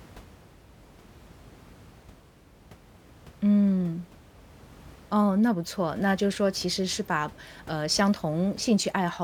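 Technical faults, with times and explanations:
Nothing stood out on listening, with only a faint room noise sitting about 25 dB below the speech.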